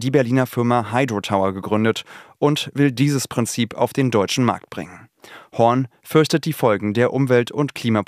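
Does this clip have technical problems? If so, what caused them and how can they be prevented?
No, nothing in the signal points to a technical fault, so there is nothing here that needs preventing.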